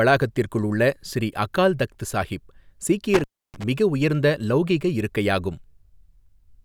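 From 3.14 to 3.64 s an intermittent contact, a loose plug or cable briefly opening, drops the speech for about 301 ms just before "மிக உயர்ந்த". Crackle marks both edges. The waveform shows a near-flat gap between sharp spikes, and the spectrogram shows vertical broadband streaks around faint hiss.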